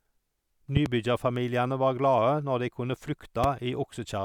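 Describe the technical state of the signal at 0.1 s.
At 0.1 s the speech signal is intact, with no audible fault at that moment.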